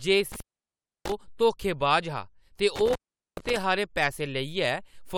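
At 0.32 s the speech drops out through an intermittent contact, a loose cable or plug that briefly loses connection and stays open for about 650 ms within the disturbance ending at 1.12 s. Crackle marks both edges. While the line is open, faint hiss remains. The same fault returns from 2.76 s to 3.57 s, this time open for about 420 ms. On a waveform each gap shows as a near-flat stretch bounded by sharp spikes. A spectrogram shows dark bands flanked by broadband vertical streaks.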